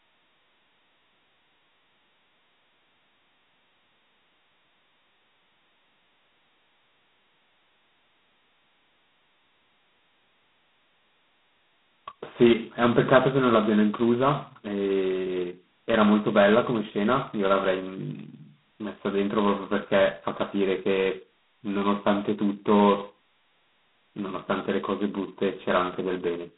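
Throughout the speech, G.726 ADPCM coding at its coarsest setting adds a harsh, rasping hiss that swells and fades with the speech level, consistent with 16 kbit/s. The band runs about 150 Hz to 3.7 kHz, and a spectrogram shows a hard ceiling near 3.9 kHz with grainy noise filling the gaps between harmonics.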